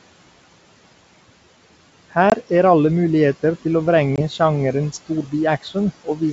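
Noise suppressor artifacts run through the whole clip. The suppressor lowers the bands it judges to be steady noise by about 18 dB, frame by frame, so the room noise, which sits about 18 dB under the speech, drops away in the gaps and comes back beneath each phrase. On a spectrogram the noise floor looks patchy, with isolated bins flickering on and off between words instead of forming an even grey haze.

Packet loss on an ADPCM call hits at 2.30 to 2.33 s and again at 4.16 to 4.19 s. Each time a hard-edged 20 ms hole opens, which fits a single lost packet filled with silence. The G.722 decoder's predictor and step size then no longer match the sender's, so the sound comes back slightly distorted before settling. The waveform shows a flat gap with vertical edges and an uneven restart. On the spectrogram each gap is a narrow blank column.

Speech cut by the noise suppressor occurs between 4.93 and 5.33 s, roughly 150 ms in total, with drops of up to about 16 dB. 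It happens again between 6.04 and 6.21 s, roughly 100 ms in total, with drops of up to about 15 dB. In both places the suppressor mistakes soft speech for noise and turns it down with the background, so those parts sound swallowed and faint. The waveform envelope sags abruptly there, and on the spectrogram the upper consonant energy fades into the darkened floor.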